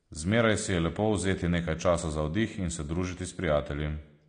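AAC compression damage runs through the whole of this speech clip: nothing survives above 9.8 kHz, and the remaining spectrum sounds dull and smeared. This is likely low-bitrate AAC-LC, consistent with roughly 32 kbps, where coarse quantisation forced a lowered cut-off and thinned detail.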